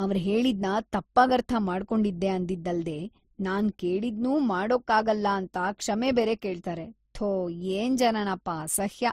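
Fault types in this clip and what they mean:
Transcoding between lossy codecs: The speech carries mixed compression artefacts throughout, likely from MP3 at 40 kbit/s re-encoded as Opus at 32 kbit/s. Nothing remains above 15.7 kHz.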